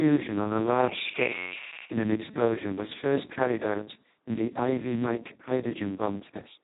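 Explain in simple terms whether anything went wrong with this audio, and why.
Heavy Speex codec damage throughout: squeezed into very few bits, the speech sounds hoarse, noisy and robotic.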